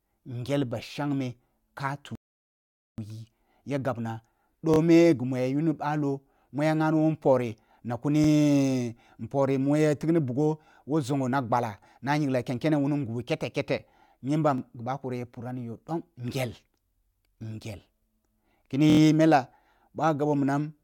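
At 2.15 s the speech drops into silence for about 0.83 s, until 2.98 s, then carries on exactly where it left off. That's a rebuffering stall: the player ran dry of downloaded audio and waited for more, so no speech is lost but the clip gets longer.

After that come repeated buffers, each a roughly 23 ms chunk replayed with hard joins, which fits a 1024-sample buffer. The first, at 4.74 s right after "ya gabna", plays twice extra. Single repeats land at 8.24 s and at 14.58 s, just before "bakori ya pura ni". The longest, at 18.90 s just before "n mella", replays four times. Each one sounds like a quick stutter or buzzy click, and nothing is skipped.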